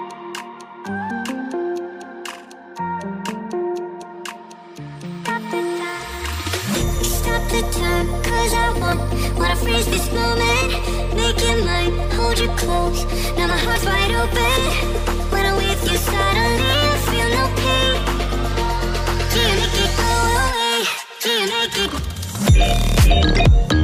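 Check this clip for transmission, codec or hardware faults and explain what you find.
Four brief faults, all damaged data in a compressed stream, at 1.09 s, 8.92 to 8.94 s, 13.75 s and 23.39 s. Each is a short chirp, squawk, click or hole cutting through the sound, where corrupted compressed frames were misdecoded before the decoder resynchronised.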